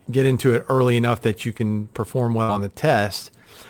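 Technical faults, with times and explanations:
1.57 to 1.61 s, short concealed packet loss: Right after "early enough that you" the speech smears for an instant, a brief wobble where the next sound is blurred rather than cleanly spoken. About 20 ms of the stream failed to arrive in time, and the receiver covered the hole by stretching the preceding sound for roughly 18 ms, then cross-fading back into the real audio. That borrowed continuation is the soft smear.
2.43 to 2.50 s, burst of packet loss: Just before "on the" the speech collapses into a held buzz or hiss that dies away, and the audio then picks up further along with a short stretch gone. A run of about 60 ms of audio was lost or arrived too late to play. The receiver kept the last sound going for about 53 ms, fading it as the gap lengthened, so the missing portion is replaced by this decaying tail.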